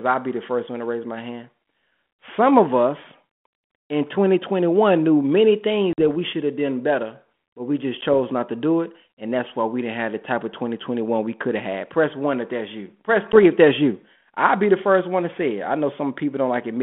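Packet loss on an ADPCM call cuts sharp silent holes at 5.93 s, 8.01 s and 13.32 s, after "knew many things", after "better but we just", and before "if that's you I'll". The first gap lasts 50 ms and the others 10 ms each. The decoder's predictor loses step, so the returning speech distorts briefly.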